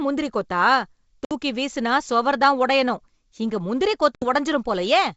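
A speech clip carried over a wideband G.722 link, whose band up to 7 kHz stays clear. It has two cases of packet loss on an ADPCM call. The first is a 60 ms hole at 1.25 to 1.32 s, just before "வீசினா சுவர் தான் உடையணும்". The second is a 70 ms hole at 4.15 to 4.25 s, right after "தான் உடையணும் இங்க முந்திரி". Each gap is hard-edged silence, the length of several lost packets. The decoder's predictor and step size then lose track of the sender's. So the speech returns with brief distortion before settling.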